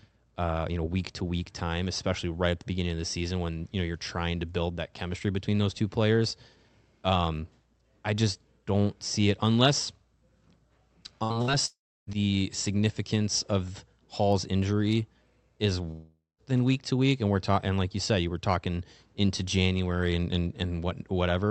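Around 11.2 s the speech stutters twice in quick succession: at 11.23 to 11.33 s and again at 11.42 to 11.51 s, the last sound is held briefly and thins out before the voice jumps ahead. These are bursts of packet loss. Each time about 60 ms of audio never arrived, and the receiver stretched the preceding sound to cover the gap, so a little of the speech is skipped.

Right after, from 11.66 to 12.10 s, the held sound runs longer, fades, and gives way to about 0.3 s of silence before the speech returns on "the significance of". The same happens from 15.91 to 16.41 s, after "injury is": a fading tail, roughly 0.18 s of silence, then "than week to week". These are long network dropouts, each likely losing close to half a second of audio that the receiver could only paper over before going quiet. The Opus call path, cut off at 8 kHz, stays steady around these gaps.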